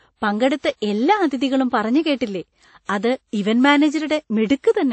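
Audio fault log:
Throughout: transcoding between lossy codecs. The speech sounds muffled, with nothing above 8.3 kHz and two kinds of coding artefact layered together. This fits a likely chain of low-bitrate MP3 re-encoded as WMA 1, where the second codec spends bits on the first codec's damage and adds its own, while the lower cut-off remains.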